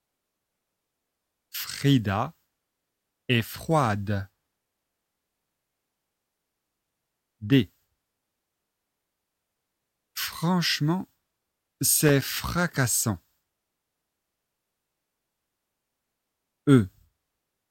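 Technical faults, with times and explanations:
12.07–12.24 s, loose connector crackle: a brief irregular burst of scratchy crackle, from a worn contact rapidly making and breaking, chopping the signal.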